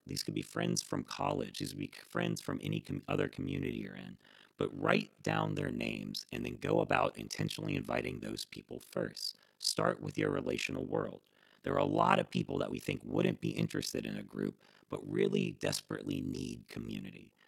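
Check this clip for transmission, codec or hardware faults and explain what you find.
One fault runs through the whole speech clip: overlap-add ripple. The frames were overlapped and summed with a window pairing that does not add to a flat gain, so the level dips by about 60 dB around 50 times a second, giving a harsh, rough flutter.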